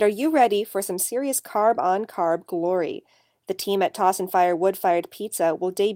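Nothing stood out as a technical fault anywhere in this recording of speech.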